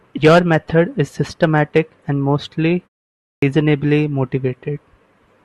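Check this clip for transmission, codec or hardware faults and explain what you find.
One fault is present, a clipped start after a pause. At 3.32 s, after a 0.52 s pause, the output device apparently went idle and took time to wake and relock, swallowing about 104 ms of speech up to 3.42 s. The speech therefore resumes abruptly, missing its first sounds.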